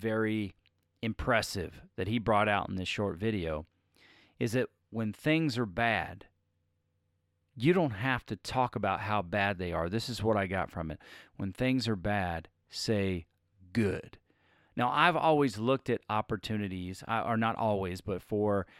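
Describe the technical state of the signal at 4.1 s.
At 4.1 s the speech signal is intact, with no audible fault at that moment.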